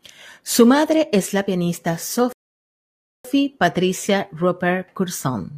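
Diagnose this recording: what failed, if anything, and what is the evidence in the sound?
After "madre es la pianista" the speech falls silent from 2.33 to 3.25 s, then resumes where it stopped: a playback rebuffering stall, data-starved, adding 0.92 s.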